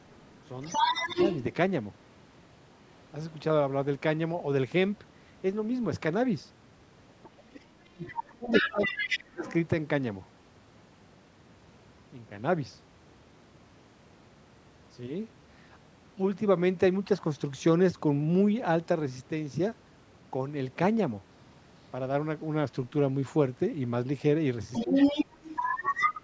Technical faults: other side's voice leaking through; speech suppressed in double talk

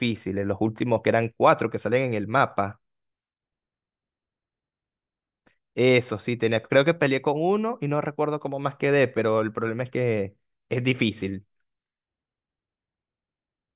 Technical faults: none

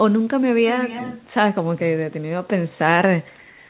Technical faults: echo leak; comfort noise in place of the background

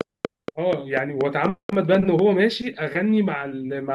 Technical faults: train of clicks

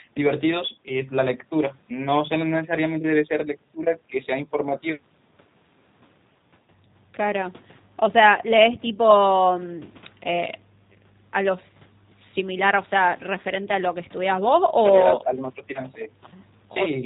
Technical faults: G.729 codec

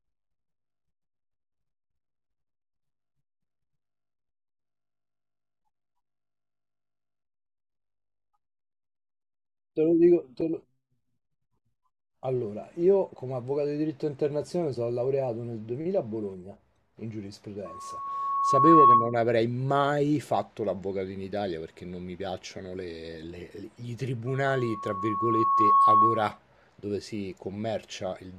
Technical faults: loudspeaker feedback squeal

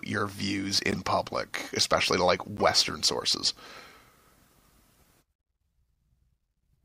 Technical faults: corrupt frame decoded

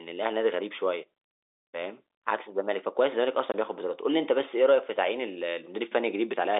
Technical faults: packet loss filled with silence

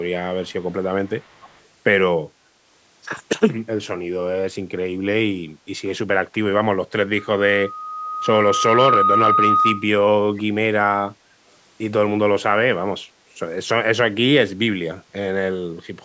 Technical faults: echo leak; loudspeaker feedback squeal; background gated by the echo canceller

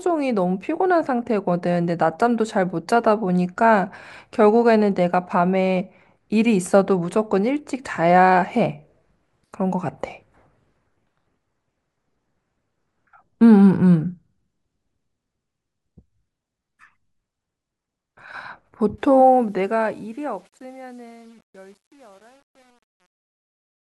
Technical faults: truncation distortion on a fade

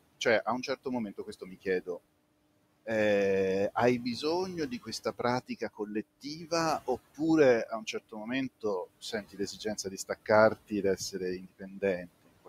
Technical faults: noise suppressor artifacts; speech cut by the noise suppressor

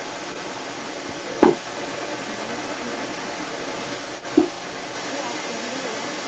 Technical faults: echo leak

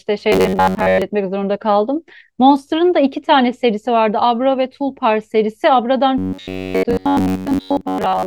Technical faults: robotic sound from repeated short buffers

